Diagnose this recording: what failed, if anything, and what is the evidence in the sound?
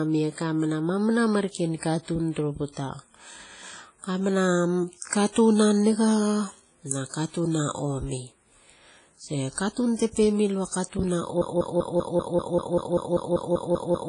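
Ringing, washy speech with hiss that breathes along with it, heavy codec damage and nothing above 10.1 kHz; this is likely WMA compression at a low bitrate, around 24 kbps.

At 5.32 to 5.36 s, a 37 ms hiss smears ahead of an attack. This is pre-echo: the codec spread quantisation noise across the block, into the quiet before the onset.

From 11.42 s to the end, a 195 ms fragment repeats back to back 14 times, a broken-record loop. A playback or stream stall likely resent the last buffer, losing the following audio.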